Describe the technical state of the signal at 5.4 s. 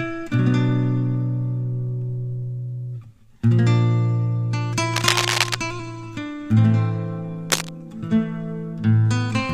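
At 5.4 s the signal carries cable scratch noise, running from 4.94 to 5.56 s at roughly the level of the sound itself. A worn connector or lead being moved is the likely cause, its contact resistance jumping erratically. It sounds like scratchy rustling, and shows as dense, irregular broadband streaks on a spectrogram and ragged spikes on the waveform.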